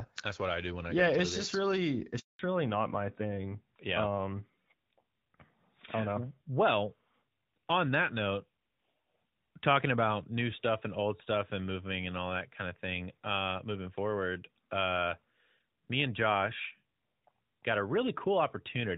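At 2.19 s, just after "it's just really", the call undergoes a handover gap: the link is passed from one network to another, and no speech frames get through during the switch. The sound fades out within a few tens of milliseconds and stays silent for 200 ms, until the new connection picks up at 2.39 s. Whatever was said in that window is simply gone rather than garbled.

From 2.39 s to the end, the call shows a fallback to narrowband. After the handover, the link no longer carries HD Voice and drops to an older narrowband codec, consistent with AMR-NB at 12.2 kbit/s. Before this, the wideband coding, which fits AMR-WB at 12.65 kbit/s, leaves only light coding damage. After the switch, nothing above 4 kHz survives. The sound loses its airy top end and sibilance, turning duller, boxier and rougher for the rest of the clip.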